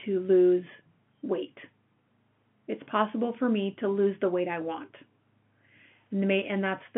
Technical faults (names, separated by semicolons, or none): none